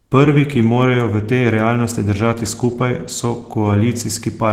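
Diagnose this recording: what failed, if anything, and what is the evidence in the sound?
Opus compression at the codec stage is the likely fault. The sound points to a low bitrate, around 16 kbps, in hybrid mode. Throughout the clip the speech is plainly muffled and hoarse, and its upper band turns grainy and noisy where detail was discarded.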